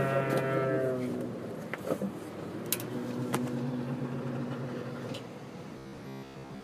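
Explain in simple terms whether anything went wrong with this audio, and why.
Near the end, from 5.78 s to 6.63 s, the sound turns into a rigid, metallic buzz at about 67 Hz: robotic sound from repeated short buffers. The likely cause is that fresh audio stopped arriving on time, so the playback kept looping a tiny slice, about 15 ms long, to fill the gap. For most of that stretch, you hear these repeats instead of the real audio, and the steady loop rate is what creates the fixed buzzing pitch.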